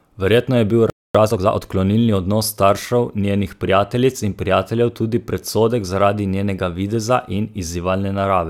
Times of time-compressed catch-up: 1.15-1.63

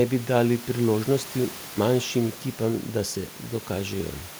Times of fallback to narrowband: none

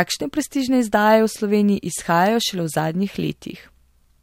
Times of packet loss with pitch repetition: none

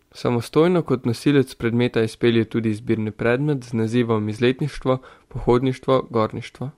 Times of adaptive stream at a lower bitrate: 2.00-6.78

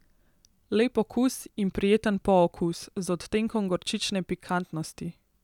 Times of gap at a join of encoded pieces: none

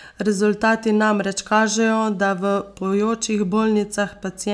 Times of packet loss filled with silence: none

